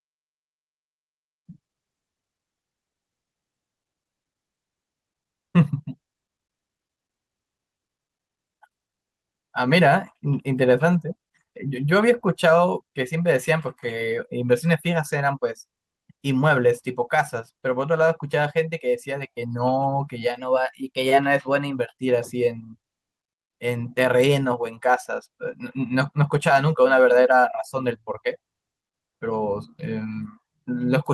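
A speech recording with one timing fault: from 20.4 s to 21.77 s the audio suddenly runs about 5.6% fast, and the pitch rises with it by roughly 94 cents, close to a full semitone, before both snap back to normal. This is most likely a drift correction step, where clock-matching software briefly changed the playback rate in a single jump to drain or refill its buffer rather than adjusting gradually.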